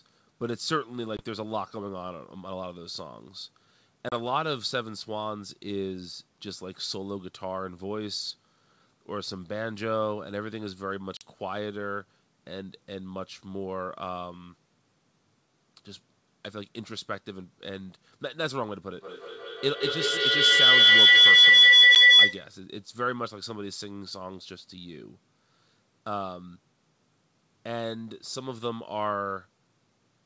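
Short hard-edged dropouts punch through the speech at 1.17 s (20 ms), 4.09 s (30 ms), 11.17 s (40 ms) and 21.95 s (10 ms). Each gap is followed by brief, slight distortion that settles within some tens of milliseconds. This is packet loss on an ADPCM call: a few packets went missing and were filled with silence, which left the decoder's adaptive predictor and step size out of step with the sender's until they re-converged. The hole lengths point to packets of roughly 10 ms each. From 18.96 s to 22.54 s a piercing tone near 3 kHz rises to about 17 dB above the speech, pulsing roughly every 150 ms and stopping abruptly. This is feedback howl. Two devices in the same room on one call formed a microphone-to-loudspeaker loop with more than unity gain, so each pass grew louder and narrowed toward the frequency the loop favours, repeating at the loop's delay until the loop was broken. The speech runs through G.722 wideband telephone coding at 64 kbit/s, with the call's microphone processing leaving nothing above 8 kHz.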